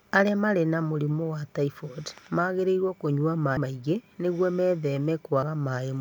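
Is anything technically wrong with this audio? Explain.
Yes, there are two spots where compressed frames were skipped. At 3.57 s, between "wa typhoid magĩrĩirũo kũnyua" and "maingĩ nĩguo", the audio jumps ahead by roughly five 32 ms frames, around 150 ms, and at 5.42 s it drops a couple more, around 70 ms. Those frames were missing or rejected by the decoder, so playback leaps forward. At each join a short stretch of speech is simply gone.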